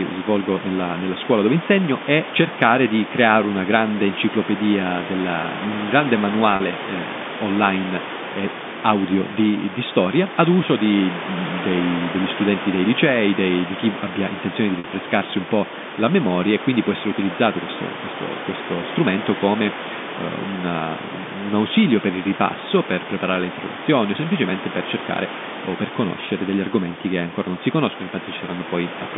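At 6.56 s, after "enciclopedia della un grande", 40 ms of audio drops out. A second 50 ms gap at 14.79 s falls between "chi abbia intenzione di" and "un po' la memoria". This is packet loss with pitch repetition: the receiver loops the last pitch period, so each gap sounds like a brief, buzzy hold.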